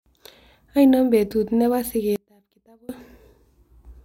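At 2.16 s, after "betut ne po", an audio dropout to a faint residue cuts the speech abruptly for 0.73 s, leaving sound roughly 30 dB down, likely from an upstream break.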